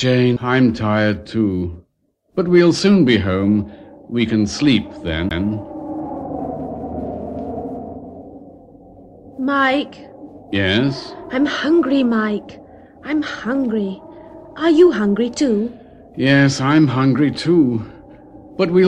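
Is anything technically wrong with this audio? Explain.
Yes. There are two CD skips. The first is at 0.36 s and the second runs from 5.29 to 5.31 s. In each, the player's laser has jumped to a different turn of the disc's spiral, from a knock or a flaw in the disc. Playback mutes briefly, for only a couple of milliseconds at the first skip and around 15 ms at the second. Each is heard as a small tick, and the sound then resumes from another place in the recording.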